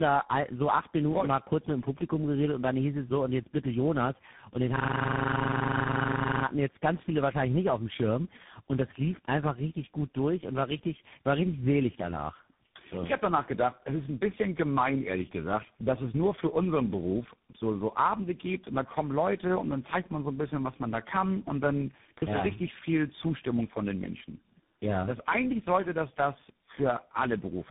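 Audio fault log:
Throughout: tandem speech coding. The speech went through several speech codecs one after another, and each one re-coded what the last had already damaged. The chain points to an AMR-NB link at 5.15 kbit/s, then GSM full rate at 13 kbit/s, and a CVSD stage at the end, with G.711 hops in between. Each low-rate coder adds its own roughness and warble on top of the previous one's, so the voice comes out more smeared than any single link would make it. Nothing gets through above 3.8 kHz, which accounts for the muffled edge.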